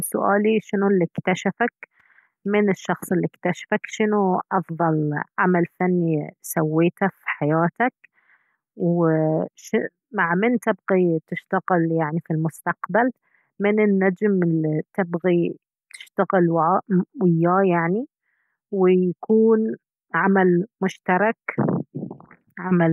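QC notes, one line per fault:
Nothing stood out on listening to this speech recording.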